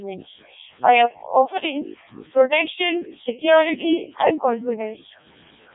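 From start to finish, the speech has passed through a Codec 2 vocoder. Nothing of the original waveform survives. Only pitch, voicing, energy and a rough spectral envelope were carried, and the decoder rebuilt the voice from sine waves. The damage is heavy. The sound is robotic and buzzy, with a mechanical texture. Nothing reaches above about 3.8 kHz. That degree of coarseness fits Codec 2's lowest mode, near 0.7 kbit/s.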